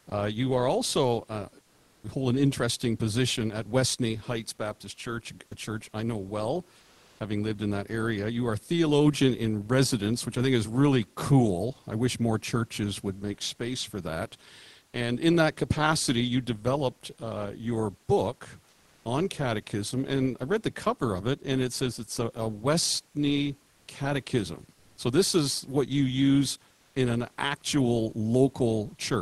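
Speech over an Opus call link (top end stops around 12 kHz), and the voice detector is causing trouble in three ways. First, there are short sound dropouts where the detector likely treated part of the sound as background and stopped sending: about 20 ms at 0.09 s, a brief gap at 5.49 s, and roughly 40 ms from 14.89 to 14.93 s. Steady noise or near silence briefly replaces the sound each time before it snaps back. Second, comfort noise replaces the real background in the pauses, from 1.63 to 2.03 s, 5.49 to 7.19 s, 18.69 to 19.05 s and 23.71 to 24.97 s. The room tone turns flat and featureless, about 15 dB quieter in the first pause and about 4 dB down at 18.69 s. This is likely Opus DTX halting transmission while the receiver synthesises filler. Third, there's an onset clipped by the voice detector at 1.94 s. About 90 ms of the start is lost, so the sound comes in abruptly with no soft lead-in, likely because the detector was slow to notice speech resuming.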